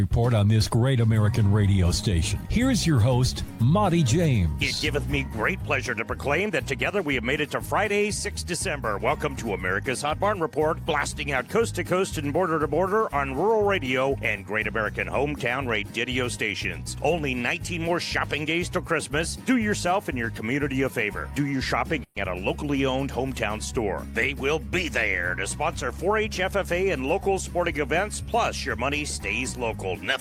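A call audio freeze at about 22.03–22.19 s stretches the last sound into a fading buzz for roughly 130 ms, likely from delayed packets emptying the jitter buffer. Nothing is lost, but everything after is pushed later. On a spectrogram this shows as a smeared, decaying band.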